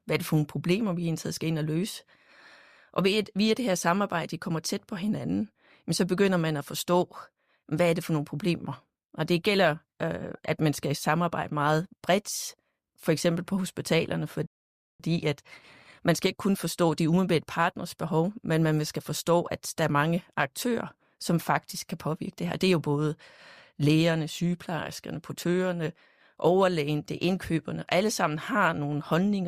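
At 14.46 s the audio halts for a rebuffering stall, going silent until 15.00 s before carrying on. The player exhausted its downloaded audio and paused until more data arrived, inserting about 533 ms of dead air. Unlike a packet dropout, where material vanishes and the sound jumps forward, here playback resumes exactly at the point where it froze, so nothing is missing and the clip simply runs longer.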